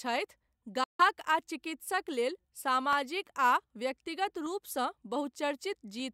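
Just before the one-second mark, from 0.84 to 1.01 s, the speech cuts out completely. That's a hole of about 150 ms, and when the sound returns it has moved on, as if it kept playing during the gap. That points to a Bluetooth dropout: the link likely fell behind, packets arrived too late to be used, and the headphones had nothing to output. The length fits roughly ten packets lost in a row.

Then from 1.39 s to about 6.0 s there's a click while the speech is running, repeating on a steady beat about every 1.53 s, four times in all. These are clock drift buffer slips. Two devices are likely running on slightly mismatched clocks, off by something like a hundred parts per million. The buffer between them slowly drifts until a tiny block of samples, only a handful each time, gets dropped or repeated, and each of those jumps is one click.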